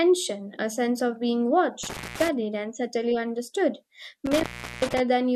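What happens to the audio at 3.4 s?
Nothing goes wrong at 3.4 s: the speech carries on intact through that moment, with no dropout, click or distortion to be heard.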